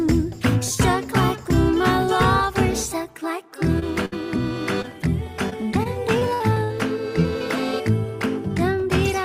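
From 3.79 to 3.83 s there is a short concealed packet loss: about 20 ms of audio arrived too late, and the receiver bridged the hole by extending the preceding sound before blending back. It is heard as a brief smear or wobble, too short to fade or jump. The same short concealed packet loss recurs from 4.82 to 4.86 s, again about 20 ms.

Between them, from 4.05 to 4.14 s, a burst of packet loss leaves a larger hole. About 60 ms of audio is gone, covered by 62 ms of the last sound continued and turned down as it runs. That becomes a held buzz or a fading hiss, depending on what preceded it, and the audio then picks up further on. Its audible decay and skipped material set it apart from the brief smears.

From 5.50 to 6.72 s comes repeated packet loss (robotic sound). Six separate gaps, the longest 61 ms, remove about 200 ms in total, and concealment fills 16% of that stretch. The result is choppy sound with pieces missing. 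What distinguishes it is the rapid recurrence of patched holes, rather than a single isolated loss.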